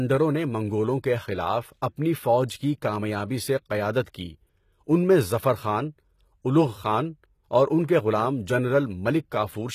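Speech, with audible damage from start to finish: the s sounds come out gritty and lispy, the upper range has a metallic, synthetic sheen that doesn't quite match the voice beneath it, and nothing sits above 14.9 kHz. This is likely HE-AAC compression at a very low rate, which fits a bitrate around 20 kbps. The codec codes only the lower spectrum properly and fills in the treble by copying those lower bands upward, so the rebuilt highs sound false.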